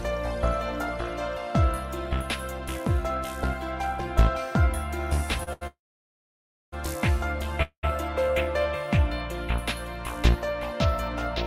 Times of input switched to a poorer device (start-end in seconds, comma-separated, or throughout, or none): none